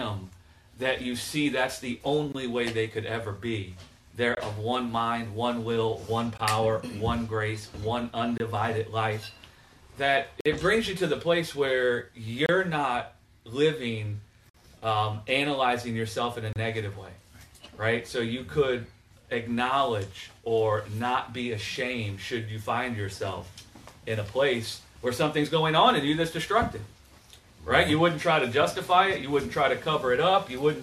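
Short bursts of silence with hard edges cut into the sound at 2.32, 4.35, 6.38, 8.38, 10.41, 12.46, 14.50 and 16.53 s, lasting from about 18 to 50 ms, the longest at 10.41 and 14.50 s. Their spacing of roughly 2 s points to a gap between stream segments: each segment's time stamps leave a small hole that the player fills with silence. A waveform shows flat silent notches, and a spectrogram shows thin vertical blank stripes across all frequencies.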